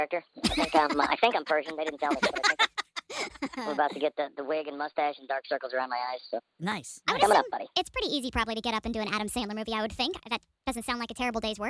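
Throughout, the sound runs about 1.38 times too fast and 5.55 semitones high, a wrong sample rate fault consistent with 16 kHz audio played back at 22 kHz without conversion.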